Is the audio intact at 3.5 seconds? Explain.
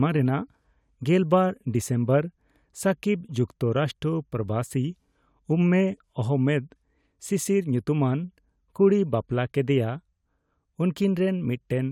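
Yes, the audio is intact at 3.5 seconds, with no dropout, click, distortion or other fault audible at that point.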